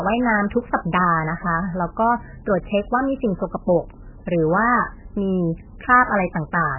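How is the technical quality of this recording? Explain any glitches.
The quality is poor, with heavy MP3 compression running through the whole speech clip. The audio has nothing above about 2.9 kHz and a watery, swirling texture, most likely from an MP3 encoder starved of bits, which fits a very low bitrate around 8 kbps. The encoder cuts off the treble and keeps dropping weak frequency lines in and out between frames, which smears consonant attacks. The shifting swirl sets it apart from a simple low-pass filter, which would dull the sound without the warbling.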